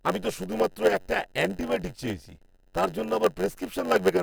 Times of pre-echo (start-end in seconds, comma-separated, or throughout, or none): none